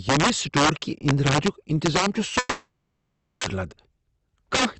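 Violent, sharp cracks erupt on the loudest syllables throughout the speech, far harsher than ordinary clipping. This is integer overflow: the signal was driven about 13 dB too hot, and around one in twenty samples exceeded the integer limit and wrapped to the opposite sign instead of being held at full scale.

From 2.39 s to 3.45 s the audio breaks off. A fading buzz first carries on from the last sound, then nearly 0.74 s of silence follows. The speech resumes with roughly 0.76 s missing. The likely cause is a long network dropout, where no packets arrived and the receiver concealed the gap before giving up.

From 3.53 s to the end at 4.79 s the speech sounds hurried but keeps its pitch, running at about 112% of normal speed. This is a jitter buffer speed-up. After the dropout the buffer held surplus delay, so the receiver trimmed short pitch-period slices, about 150 ms in total, to catch up. 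The Opus call path's 8 kHz bandwidth limit is audible as a dull top end throughout.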